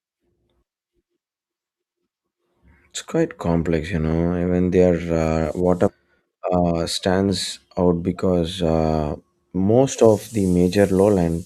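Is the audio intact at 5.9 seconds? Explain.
No. Between 5.87 and 5.92 s the speech jumps forward abruptly, with a short blip at the join and part of the programme missing. This is most likely a stream segment skipped: one chunk of the segmented stream did not arrive or failed to decode, and the player went on with the next segment instead of stalling. What follows is continuous again, but the audio that belonged to the missing segment is gone.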